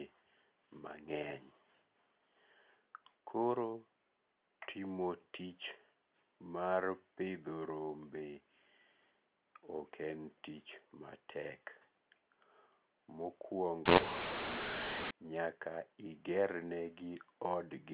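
From 13.86 to 15.11 s, mu-law and A-law are mixed up: mu-law telephone audio is decoded as A-law, scrambling sample levels. The speech turns harsh and gritty, pauses fill with hiss, and the waveform shows jagged, uneven peaks while the spectrogram smears broadband noise throughout.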